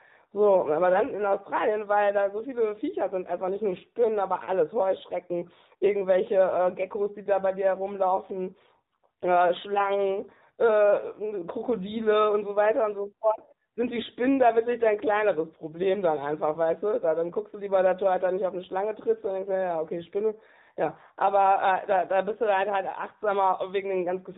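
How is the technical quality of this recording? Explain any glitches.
The recording is plainly degraded by AMR narrowband mobile codec coding, which runs for the whole clip. Nothing above 4 kHz survives. The codec rebuilds the voice from a vocal-tract model fed by sparse pulses, and the buzzy, synthetic texture here points to a mode of about 7.4 kbps. That texture distinguishes it from plain telephone band-limiting, which only dulls the sound.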